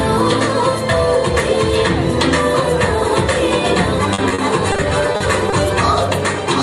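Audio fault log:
4.13–5.54 s, repeated packet loss (robotic sound): ten short holes, the longest 50 ms, come in quick succession. About 250 ms is patched by stretching the preceding sound and 160 ms is simply lost, so about 18% of the stretch is concealed. The result sounds choppy, with pieces missing. On a spectrogram, the harmonics turn into smeared, repeated bands broken by narrow vertical gaps. The waveform shows repeated identical cycles and brief dropouts.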